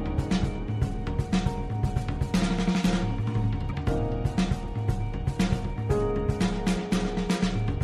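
At 3.70 s the music has a brief glitch. This is a corrupt frame decoded: damaged compressed data, likely about two frames, was played with misplaced frequency energy.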